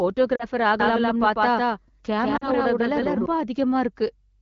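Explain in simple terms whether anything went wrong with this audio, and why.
Yes, two things went wrong. Twice the speech briefly drops out, at 0.35 to 0.45 s and again at 2.37 to 2.50 s. These are lost AMR speech frames: radio errors corrupted about 40 ms of data each time, and the phone decoder patched the gap by stretching the last good sound while fading it.

From 0.80 s to 3.26 s a second copy of the speech plays about as loud as the first, trailing roughly 0.15 s behind, and starts and stops abruptly. This doubled audio track most likely comes from the same sound being captured twice through a slower path.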